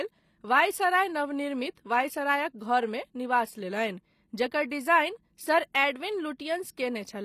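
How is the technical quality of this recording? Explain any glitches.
The recording has plainly audible compression damage throughout. HE-AAC compression runs the whole length of the speech. The treble is likely rebuilt by spectral band replication at a low bitrate, around 24 kbps, so s sounds come out gritty and metallic. A spectrogram shows repeated, blocky upper bands that stop abruptly at 15 kHz.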